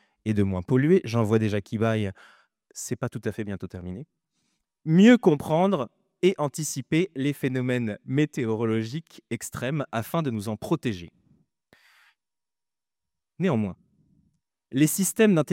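Nothing here calls for a fault description, since the audio runs along without a single glitch, dropout or disturbance anywhere in it.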